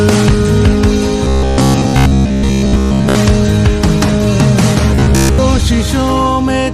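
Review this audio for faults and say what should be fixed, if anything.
Robotic sound from repeated short buffers, from 1.25 to 3.15 s and again from 4.95 to 5.38 s: both stretches take on a rigid, metallic buzz at 66.8 Hz. The likely cause is that fresh audio arrives too slowly, so playback keeps looping a segment of about 15 ms, one period of that buzz, while most of the real material is dropped. The sound's outline survives roughly under the fixed pitch. Preventing it means giving the audio path enough buffering and processing headroom that new blocks always arrive before the previous one runs out.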